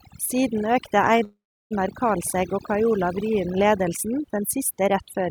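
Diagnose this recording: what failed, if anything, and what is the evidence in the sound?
Across the whole clip the background sits at near silence, dotted with twinkling specks, and the speech has its quieter detail hollowed out. This is overdone noise removal at the call processing stage. The suppressor was set too aggressively, so it pulls individual frequency bands down or out whenever they come close to its noise estimate. Low-level parts of the speech fall under that threshold and are removed along with the noise.

From 1.23 to 1.73 s the speech stops and the last sound carries on as a fading buzz or hiss that drops to silence for about 340 ms. The speech then resumes exactly where it broke off, with nothing skipped and everything after it arriving about 473 ms later. That is a call audio freeze at the network stage. The likely cause is packets held up in transit, leaving the jitter buffer empty so the receiver filled the gap itself.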